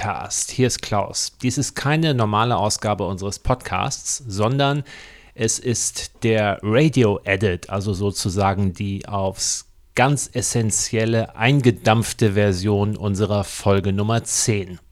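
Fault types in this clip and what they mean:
Periodic USB or driver dropouts: Something blocks the audio path at a fixed interval, and a tiny slice of sound is skipped each time. Here it starts at 3.76 s and runs to 14.78 s, repeating every 0.5 s, about twenty times. Each loss is only a fraction of a millisecond. The speech jumps forward slightly at each gap. This is heard as a steady train of ticks under the talking.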